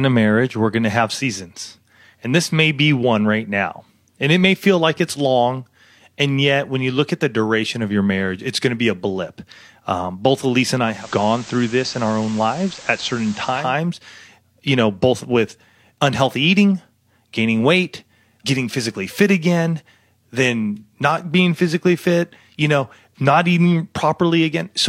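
Around 10.81 s the speech drops back from the digital stream to the FM analogue feed, a classic digital radio blend to analogue. The receiver lost the digital signal and cross-faded over about 310 ms. Once on FM, a layer of hiss sits roughly 20 dB under the speech. The level stays put. At 13.76 s it blends back to digital.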